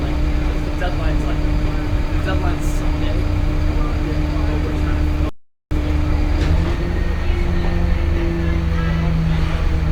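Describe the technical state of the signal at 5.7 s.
At 5.7 s the sound is just emerging from a playback stall, 5.29–5.71 s: about 0.42 s of silence, likely the player starving for data. That is longer and cleaner than a brief dropout click.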